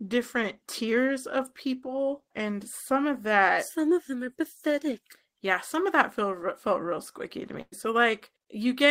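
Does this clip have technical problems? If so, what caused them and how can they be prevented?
Yes. A burst of packet loss hits the speech from 7.61 to 7.74 s. Roughly 100 ms of audio never arrived in time, so the receiver filled a gap of about 100 ms by extending the last received sound and fading it down, ending in a short silence of about 40 ms. The speech then resumes later than it should, with that stretch missing. Prevent it with forward error correction, redundant packets, or a larger jitter buffer on a more stable network path.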